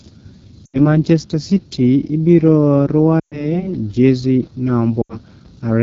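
A speech clip carried over the AMR wideband (HD Voice) codec, with a rough, raspy texture throughout that fits one of its lowest rates, around 8.85 kbit/s, rather than general noise or band-limiting. Lost AMR speech frames occur at 0.65 to 0.98 s, just before "city ibiro", at 3.19 to 3.61 s, and at 5.02 to 5.16 s, covering about 80, 120 and 80 ms of audio. Instead of cutting to a hard silent gap like a network dropout, each one briefly carries the last sound on and drops to near silence within two frames, then it returns weak or rough.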